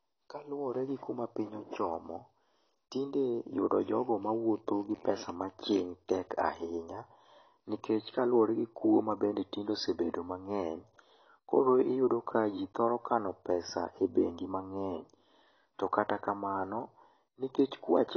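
From start to finish the speech is band-limited, with nothing above about 6.3 kHz, and the codec damage is plainly audible. This is likely AAC compression: an AAC-LC encoder starved of bits drops the cut-off and quantises the remaining spectral lines coarsely against its hearing model, which fits a low bitrate in the region of 24 kbps. The result is dull and smeared, with a warbling, fizzy texture on sibilants and sustained vowels.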